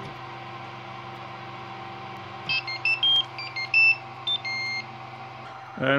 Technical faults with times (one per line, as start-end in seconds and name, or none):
0.17-5.66 periodic USB or driver dropouts